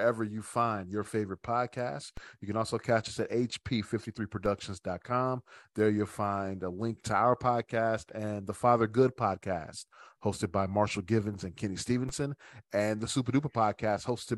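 Speech with a DC step at 2.17 s (just after "find your favorite podcast"), 4.46 s and 12.09 s: each offset of about -29 dBFS thumps, showing as a baseline jump decaying through a 20 Hz high-pass, with a broadband vertical line on the spectrogram.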